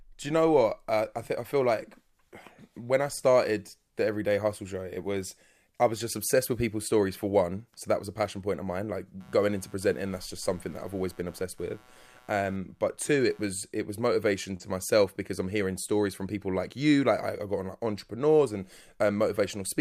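From 9.20 to 13.47 s, just before "it was motivation to", computer activity noise buzzes at around 150 Hz, roughly 30 dB below the speech, from load-driven ground disturbance.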